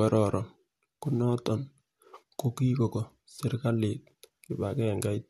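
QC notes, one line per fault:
No faults were heard in this speech recording. Nothing in it calls for a timestamped entry.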